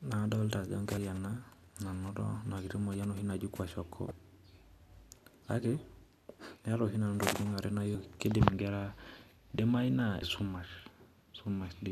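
Brief glitches break into the speech at 0.94–0.98 s, 4.08–4.11 s, 7.92–7.95 s and 10.19–10.22 s. Each is damaged data in a compressed stream: corrupted bytes make the decoder misread those frames and lose sync until it finds the next valid header.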